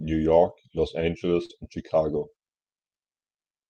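Short concealed packet loss at 1.45 to 1.51 s: about 40 ms of speech never reached the decoder in time, and the receiver filled roughly 38 ms of it by extending the preceding sound, carrying its pitch forward where it was voiced and substituting shaped noise where it was not, before blending back into real audio. It comes across as a brief smear or wobble, and a short consonant there may vanish.

Lost packet rebuilt from error correction at 1.49 to 1.51 s: the tail of that same gap, 20 ms long and consistent with a single lost packet, was recovered from the low-bitrate redundant copy carried in the following Opus packet. That leaves no silence, but this stretch sounds rougher and noisier than its surroundings. It passes through a call path running near 40 kbps with audio reaching up to 12 kHz.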